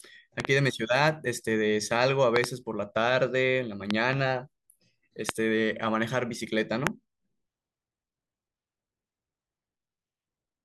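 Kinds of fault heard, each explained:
Loud pop: Sharp pops burst out well above the speech, peaking roughly 20 dB louder, some as quick double pops, while the speech carries on underneath. Each is likely a sudden voltage pulse added to the signal, from a switch, static or a driver glitch.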